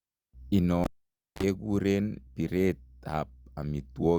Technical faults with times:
0.84-1.43 cable pulled and plugged in

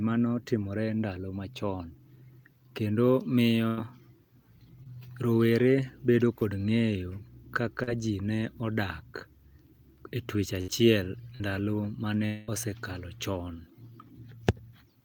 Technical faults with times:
3.67-3.79 burst of packet loss
4.83-4.87 short concealed packet loss
6.39-6.43 short concealed packet loss
7.83-7.89 short concealed packet loss
10.61-10.70 burst of packet loss
11.36-11.42 short concealed packet loss
12.26-12.49 long network dropout

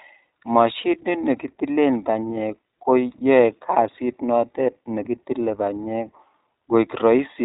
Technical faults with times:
0.00-7.45 iLBC codec
3.96-3.99 lost iLBC frames

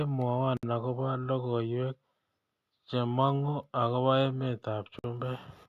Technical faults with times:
0.57-0.63 gap at a join of encoded pieces
4.99-5.04 gap at a join of encoded pieces

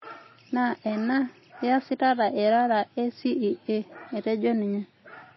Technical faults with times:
0.00-5.36 MP3 compression

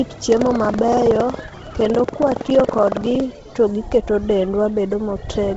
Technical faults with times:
0.00-5.56 Bluetooth LC3 compression
0.00-3.22 buffer tearing

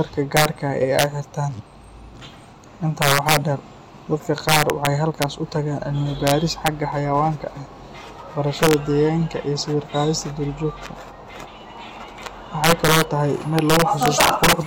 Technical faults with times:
0.00-14.67 integer overflow

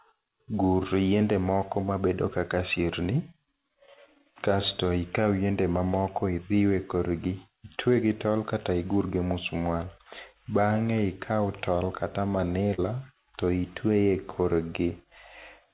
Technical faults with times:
12.74-12.80 short concealed packet loss

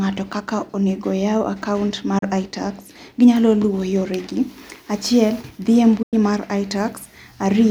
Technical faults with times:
2.18-2.23 digital broadcast dropout
6.02-6.13 digital broadcast dropout

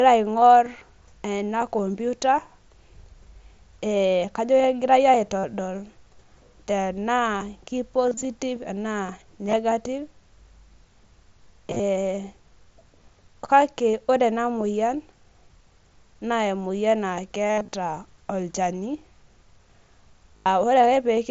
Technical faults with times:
5.39-5.44 concealed Bluetooth headset packet loss
8.07-8.25 concealed Bluetooth headset packet loss
9.48-9.56 concealed Bluetooth headset packet loss
11.68-11.80 concealed Bluetooth headset packet loss
13.92 concealed Bluetooth headset packet loss
17.48-17.73 concealed Bluetooth headset packet loss
20.37-20.46 concealed Bluetooth headset packet loss

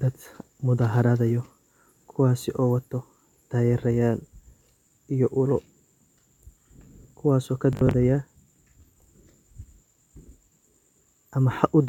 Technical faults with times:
7.73-7.94 Bluetooth stutter

